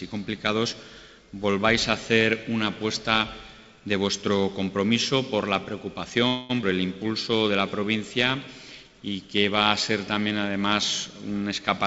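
At 6.28 s a call audio freeze begins. It lasts until 6.51 s. The last sound is stretched into a fading buzz for about 214 ms. Packets were likely held up in transit, so the jitter buffer ran dry. Nothing is lost. The audio simply resumes late.

From 6.61 to 6.65 s there is a skip ahead. About 150 ms of audio is dropped. The two sides join almost directly, with only a tiny fill. This takes back about 150 ms of the 214 ms delay the freeze added.

Two jitter buffer slow-downs follow. From 7.03 to 8.32 s the audio plays at 94% speed, adding 90 ms. From 8.84 to 9.17 s it plays at 87% speed, adding 49 ms. The buffer repeats single pitch periods to rebuild its reserve. Sounds drag at an unchanged pitch. Throughout, nothing is heard above 8 kHz, which fits a G.722 call path.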